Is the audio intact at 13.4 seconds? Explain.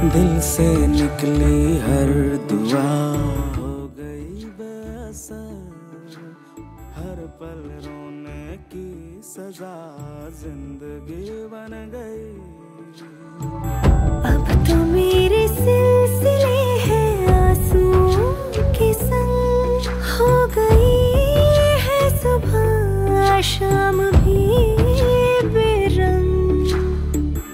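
No. From 13.21 to 13.76 s, a level change of about 20 dB moves in unsmoothed 1 dB steps, roughly fifty a second. Each step clicks, producing audible zipper noise.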